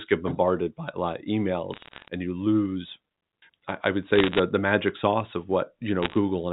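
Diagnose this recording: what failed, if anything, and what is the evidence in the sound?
Sample clock jitter at the converter puts a rough hiss under the whole clip that swells on loud, bright syllables and drops out in the pauses. The clock wobble sounds like a few microseconds, leaving error about 35 dB below the speech.

Bit errors on a digital phone line show up as bursts of crackle and sharp ticks at 1.74–2.08 s (after "by a lot of"), 4.16–4.39 s (after "I would") and 6.03–6.14 s (after "the magic sauce of"). Flipped bits corrupt individual G.711 samples, roughly one bit in two hundred in the first burst and one in 140 in the other two.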